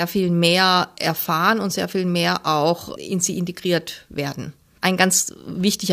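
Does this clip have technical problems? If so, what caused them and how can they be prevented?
No, no technical faults present.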